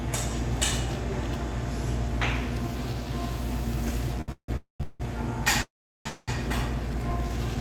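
At 4.21 s there's a short stall from a late packet: the jitter buffer ran dry, so the last bit of sound gets stretched for about 64 ms, from 4.21 to 4.30 s, then picks up exactly where it left off, with nothing lost.

Right after that come call audio freezes at 4.32 to 4.50 s, 4.56 to 4.82 s, 4.82 to 5.02 s, 5.62 to 6.07 s and 6.07 to 6.30 s. Each is most likely packets held up in transit. The held sound continues as a buzz or hiss that fades, dropping to silence for about 80, 130, 0, 370 and 10 ms respectively, before resuming with nothing missing.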